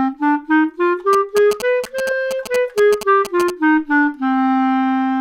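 From 1.13 to 3.50 s, GSM signalling bursts from a nearby 2G phone get rectified by the audio circuit, adding a galloping dit-dit-dit of short 217 Hz buzzes about 10 dB below the sound.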